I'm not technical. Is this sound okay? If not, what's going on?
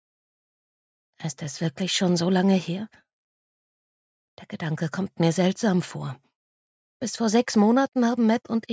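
Yes, nothing here is faulty. It has the sound of a call microphone, with the deepest bass trimmed away and nothing above about 8 kHz, which is normal for a call.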